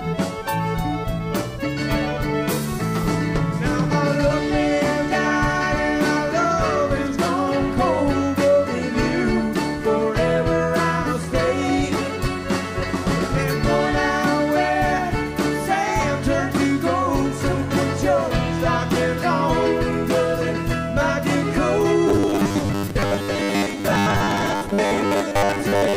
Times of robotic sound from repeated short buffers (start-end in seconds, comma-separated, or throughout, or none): 22.07-25.96